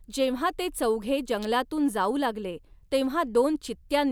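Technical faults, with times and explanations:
1.43–1.45 s, electrical switching spike: a brief sharp snap added on top of the speech, likely a nearby switch arcing; unlike a dropout, no sound is lost beneath it.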